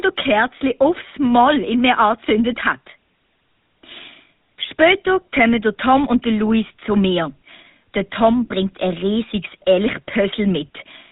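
From start to finish the speech carries GSM full-rate codec damage, plainly audible. Nothing reaches above 4 kHz, and the excitation, rebuilt from sparse regular pulses, leaves a buzzy, gravelly rasp that fits roughly 13 kbps. Simple band-limiting would sound muffled but smooth, without this rasp.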